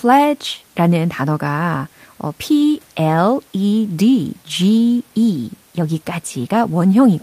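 No technical faults can be heard in this speech recording, and the only background is the room's own noise, which sits about 37 dB below the speech.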